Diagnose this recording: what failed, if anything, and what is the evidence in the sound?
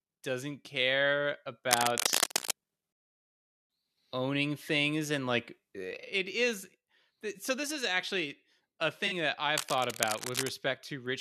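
Cable scratch noise, likely from a worn analogue cable or connector shifting, puts uneven scratchy bursts over the speech after "doesn't care" (1.71 to 2.51 s, roughly as loud as the speech) and again from 9.55 to 10.50 s, a little quieter.

At the codec stage, a corrupt frame was concealed after "this is actually a". The decoder patched over the damage for 65 ms at 9.06 to 9.13 s, which fits two damaged AAC frames.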